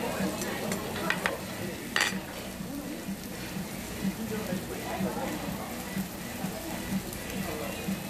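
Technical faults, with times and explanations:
1.40 s repeated buffer: a brief click-like buzz as one 1.45 ms slice sounds four times with hard joins, which fits a 64-sample buffer replayed while new audio arrived late.
6.15 s repeated buffer: a single short click where a 1.45 ms slice plays twice, the device repeating its last small buffer because fresh audio missed its deadline.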